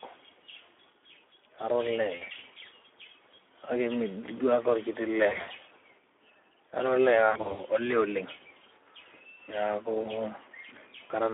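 The Speex codec colours the whole speech clip. Band runs about 250 Hz to 3.6 kHz. Too few bits reach the excitation, which fits roughly 11 kbps. The voice sounds plainly noisy and hoarse, with a coarse grain.

VoIP packet loss concealed by the speech codec strikes at 2.15–2.26, 5.27–5.49, 7.29–7.63 (just before "olee oleng") and 10.01–10.13 s. The decoder stretches its last pitch and filter. Sound smears into a fading buzz or coloured noise, and recovery lags.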